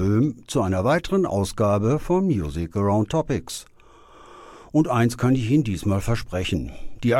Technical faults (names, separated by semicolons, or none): none